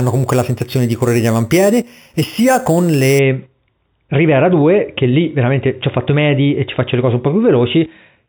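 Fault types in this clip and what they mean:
Imaging from sample-and-hold upsampling: The speech was raised to a higher rate by repeating each sample, with no smoothing filter. This leaves mirror copies of the spectrum above the original band. Here the lowest copy sits between 4 and 8 kHz, which fits audio first held at 8 kHz. It runs about 18 dB below the speech. It adds a bright metallic fizz that rises and falls with the speech, from 0.00 to 3.19 s.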